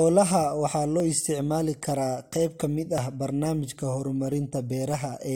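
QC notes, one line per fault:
1.0 s and 2.98 s, overlap between stream segments: Adjacent segments, apparently about 2 s long, carried overlapping timestamps, and the player trimmed roughly 6 ms of audio that was never actually duplicated. The waveform jumps across each missing stretch and produces a brief click or tiny skip, once just before "isticmaali karaa qayb ka" and again between "karaa qayb ka mid" and "ah barnaamijka". The regular spacing of the skips follows the segment boundaries.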